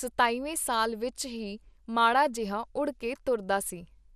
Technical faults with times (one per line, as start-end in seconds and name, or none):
0.00-4.15 MP2 compression